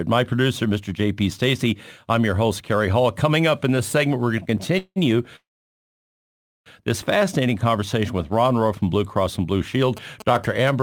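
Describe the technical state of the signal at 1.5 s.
The signal at 1.5 s is intact, with no audible fault at that point in the speech.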